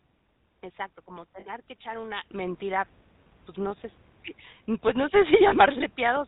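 The whole clip has the GSM full-rate codec's sound: speech squeezed through a vocal-tract model driven by sparse pulses, at a 13 kbps rate. Nothing reaches above 4 kHz, and the codec damage is plainly audible as a buzzy, gravelly roughness.

From 1.40 to 1.47 s, just before "que echar una", there are lost GSM frames. The decoder papers over a 60 ms gap, which fits about three 20 ms frames, by repeating the last good frame. You hear a brief rough, metallic ring.

At 2.31 s, right after "que echar una", a sudden gain jump of about 9 dB kicks in and stays to the end. Speech and background step up together with no ramp, likely from a digital gain setting being applied instantly.

At 5.48 to 5.55 s, more lost GSM frames cover a 40 ms gap, which points to about two frames. It's the same held metallic smear, just shorter.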